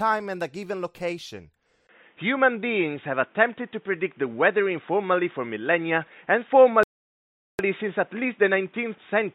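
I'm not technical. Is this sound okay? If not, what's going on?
No. At 1.87 s the speech suddenly turns dull and boxy, with a tiny gap at the change, a shift in loudness and some new background noise. The clearer high tones vanish to the end. This points to an input switched to a poorer device, likely a weaker microphone or headset.

Then, from 6.83 to 7.59 s, the sound stops dead for about three quarters of a second and then carries on. That is a playback stall, likely the player running out of data and pausing until it caught up.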